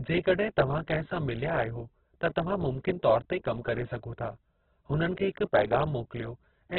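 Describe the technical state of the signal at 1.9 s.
At 1.9 s, as throughout, the speech sounds muffled and grainy, with nothing above 4.4 kHz. Likely Opus compression starved of bits: narrowed bandwidth, noise-filled bands.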